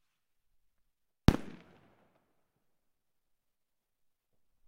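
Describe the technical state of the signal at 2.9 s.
Around 2.9 s the signal is intact, with no fault of any kind audible at that moment.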